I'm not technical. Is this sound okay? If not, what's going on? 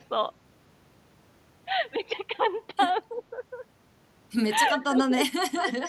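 No, not quite. The speech dips three times: barely at 3.15 to 3.21 s, then sharply from 4.79 to 5.38 s, where it gets much quieter in patches, and once more, briefly but deeply, at 5.56 to 5.63 s. This is speech suppressed in double talk. Both ends were likely talking at once, and the echo canceller couldn't tell this voice from the echo of the other person, so it turned everything down.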